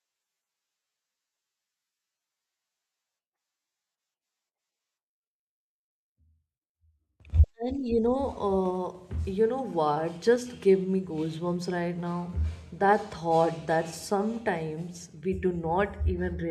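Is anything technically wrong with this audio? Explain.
No, no technical faults present.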